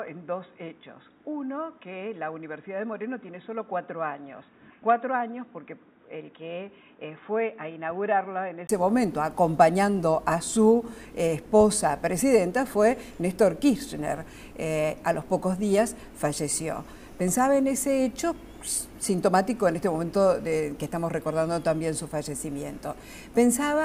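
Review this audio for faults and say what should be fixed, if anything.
From 0.0 to 8.69 s the audio is band-limited, with nothing above 3.8 kHz, about 10 dB quieter, and has a different tone and a noise floor around 40 dB below the signal. At 8.69 s a 20 ms silence is followed by full bandwidth and level. This is likely an input switched to a poorer device, such as a secondary microphone or a headset call profile, before the system returned to the main input. Locking the input device and disabling automatic headset or call-profile switching before recording prevents this.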